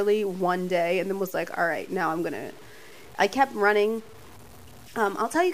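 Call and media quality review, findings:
Low bit depth without dither, throughout: gritty distortion following the speech, quiet tails sputter or drop out. Likely 7-bit truncation, noise about 25 dB down. Stair-stepped waveform; signal-locked spectrogram haze.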